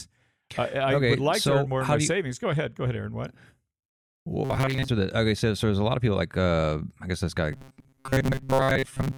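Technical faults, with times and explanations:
4.45–4.88 s and 7.52–9.18 s, robotic sound from repeated short buffers: the speech turns into a rigid, metallic buzz pitched at 133 Hz, still loosely following the syllables. The second stretch starts just after "I guess this guy" and runs to the end. This is likely caused by audio arriving too seldom, so playback loops a slice of about 7.5 ms (one over 133 Hz) while most of the real signal is skipped.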